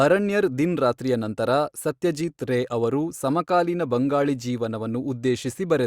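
No dropouts, clicks, distortion or level jumps turn up anywhere in the speech; no technical faults to report.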